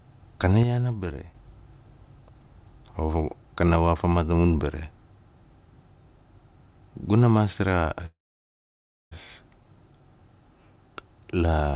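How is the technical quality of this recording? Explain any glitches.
The recording has two clear glitches, and the speech carries the narrow, band-limited sound of a phone call, with nothing above 4 kHz, which fits G.711-style telephone coding.

From 0.63 to 1.35 s the speech abruptly drops by about 6 dB, then recovers. One channel dropping out before the mono mix is the likely cause.

From 8.06 to 9.13 s the speech halts, a brief fading buzz or hiss gives way to near silence for about 0.97 s, then resumes exactly where it stopped. This is a call audio freeze, likely caused by late packets draining the jitter buffer. Nothing is lost, but everything afterward arrives about 1.05 s late.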